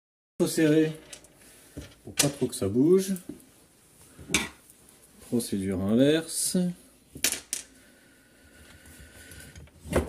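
For the first 0.4 s there is only digital silence, and then at 0.40 s the sound enters abruptly, already mid-event. This cut-off start means capture began late. Unlike a fade-in or a dropout, there is no gradual rise and nothing audible precedes the gap.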